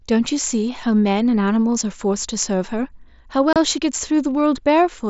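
Between 3.53 and 3.56 s the link from headset to phone dropped a short run of voice packets, and nothing filled the gap. This is unconcealed Bluetooth headset packet loss. About 30 ms of audio went missing, which fits four consecutive 7.5 ms frames on the mSBC wideband link. Silence or an idle pattern stood in for them, so the speech cuts out in a brief hole with hard edges before it resumes.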